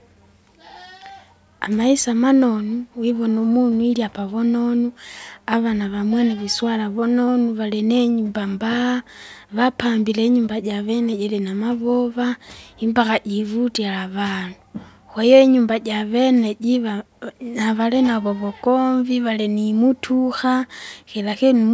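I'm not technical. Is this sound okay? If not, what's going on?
Yes, this speech recording sounds fine, and nothing in it stands out as a problem you'd need to worry about.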